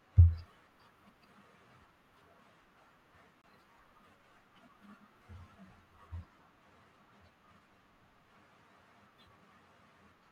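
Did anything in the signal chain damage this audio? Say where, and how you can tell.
Yes. The wireless link to the headphones most likely suffered a Bluetooth stall. Interference held back packets, the receiving buffer emptied, and playback paused until the resent packets got through. In the speech this shows as a hard dropout to silence from 3.42 to 3.44 s, about 24 ms long. The sound then resumes, with no fade or smearing at either edge of the gap.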